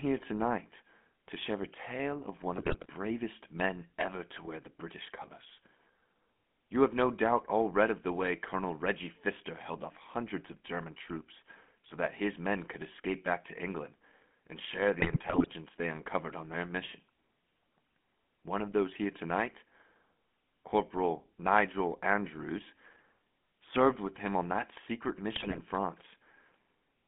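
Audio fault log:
Throughout, GSM full-rate codec: the speech carries a buzzy, gravelly roughness because the voice is rebuilt from a vocal-tract model excited by regularly spaced pulses, with much of the excitation detail thrown away. The sound is confined to a telephone band of roughly 200 Hz to 3.4 kHz, so it is thin and dull. At a steady 13 kbps this coarseness is plainly audible. Damage that is constant, rather than arriving in bursts, is what marks it as the codec itself.
2.56–2.89 s, 15.0–15.48 s, 25.36–25.60 s, GSM bit errors: short bursts of squawks, pops and gargling break in after "a tale of one", between "and share" and "they uncovered on their", and after "him on that secret". Corrupted filter, pitch and gain values reach the decoder, so for 12 to 23 frames the spectrum twists or the level jumps. Each burst lasts a quarter to half a second and then clears, unlike the steady buzz of the codec.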